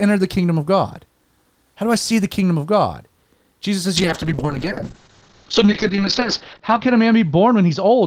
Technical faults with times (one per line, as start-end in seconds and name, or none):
3.97-8.06 call bitrate drop